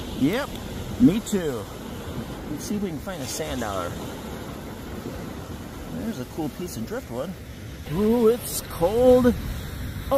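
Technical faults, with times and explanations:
No technical faults detected.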